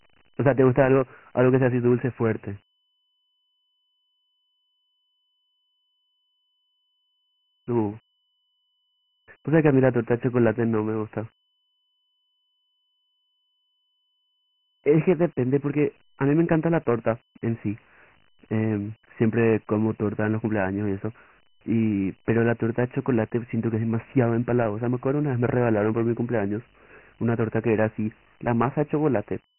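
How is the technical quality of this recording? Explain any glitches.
The quality is poor throughout: the speech sounds narrow and muffled, with nothing above 3 kHz, and a gritty, rasping hiss rides along with every syllable. This is Dialogic VOX ADPCM damage, present for the whole clip. The codec stores each sample as a 4-bit step relative to a prediction, so coarse quantisation error tracks the signal as grit. The 3 kHz ceiling points to a 6,000-samples-per-second rate, giving roughly 24 kbps.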